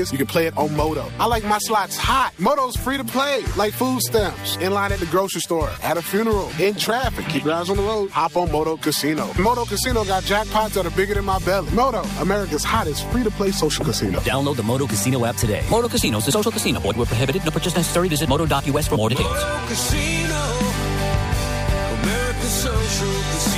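No technical faults can be heard anywhere in this audio.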